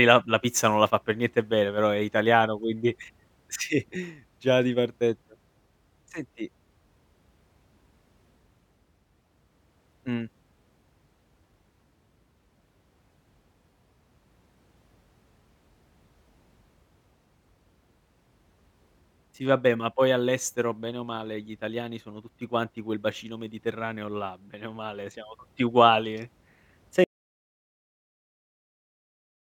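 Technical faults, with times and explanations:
27.04 s to the end: audio dropout to silence, speech cuts to silence without room tone, likely a lost input while recording continued.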